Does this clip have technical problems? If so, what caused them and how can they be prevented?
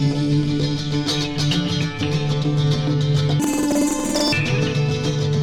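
Yes. From 3.40 to 4.40 s the sound jumps an octave higher with a 10.8 Hz flutter. This is planar audio read as interleaved: each 93 ms block plays twice at double speed, left then right. Prevent it by declaring the buffer's planar layout so the reader takes each channel's block whole.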